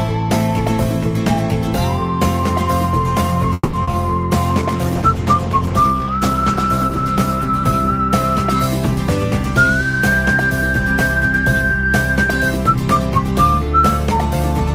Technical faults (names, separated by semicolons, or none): call audio freeze; short concealed packet loss; call bitrate drop